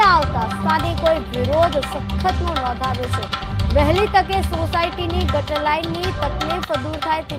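No technical faults can be heard anywhere in this recording.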